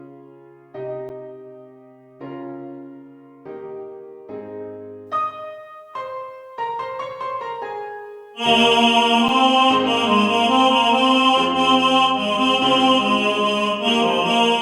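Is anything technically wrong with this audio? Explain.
Yes. Two short ticks, at 1.09 s and 9.28 s, are each a block of digital silence: about 10 ms and 6 ms of samples dropped to silence. The abrupt cut and return, too brief to be heard as silence, come across as a tick, as when output buffers aren't filled in time.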